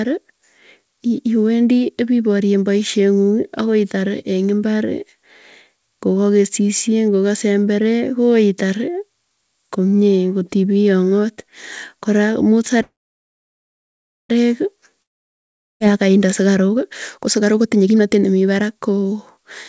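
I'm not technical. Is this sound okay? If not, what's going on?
No, there are three problems, all in the last few seconds.

The first is a call audio freeze, from 12.82 to 14.31 s. The sound stops for about a second and a half. Most of that time is silence, with only a short fading buzz at the start. Then the speech carries on from exactly where it stopped, so nothing is lost. It just arrives late. The likely cause is that the call's data got stuck on its way and the receiving end ran out of sound to play.

The second is a long network dropout, from 15.02 to 15.82 s. Again the sound cuts out, with a brief fading hiss and then silence for most of the gap. This time, when the speech comes back, a chunk of about eight tenths of a second is missing, so the speech jumps ahead. The likely cause is that the data for that stretch never arrived at all.

The third is a jitter buffer speed-up, from 16.4 to 19.38 s. 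Here the speech runs about 21% faster than normal, so it sounds hurried, though the pitch of the voice stays the same. The call was catching up on a delay that had built up. To do that it cut out many tiny slivers of sound, adding up to roughly seven tenths of a second.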